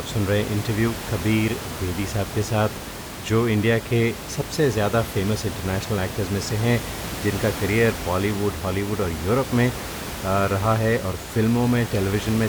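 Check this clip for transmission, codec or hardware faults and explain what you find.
No transmission, codec or hardware faults turn up in this speech clip. There is room noise from the microphone's surroundings, sitting about 10 dB below the speech, and it belongs to the recording rather than the system.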